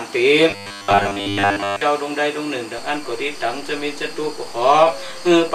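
New audio likely arrived too seldom between 0.50 and 1.81 s, so the playback repeated a short buffer of about 10 ms for most of that stretch, skipping the real material. The result is robotic sound from repeated short buffers: a rigid, metallic buzz locked at 100 Hz.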